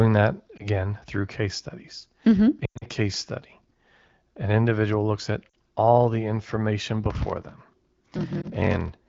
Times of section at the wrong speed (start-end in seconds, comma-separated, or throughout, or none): none